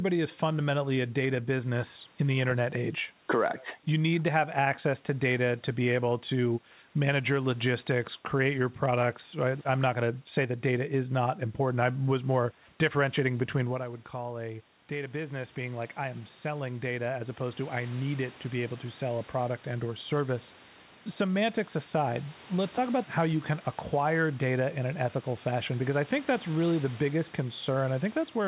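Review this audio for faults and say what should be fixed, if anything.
Automatic gain rising runs from 13.68 to 20.55 s, just after "was more differentiating between". The voice drops by about 11 dB as the talker moves back. The gain control slowly adds about 9 dB, so voice and room noise swell together. Keeping the talker at a steady distance from the microphone would prevent it.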